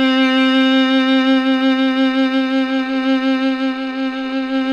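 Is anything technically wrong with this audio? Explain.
No, no technical faults heard.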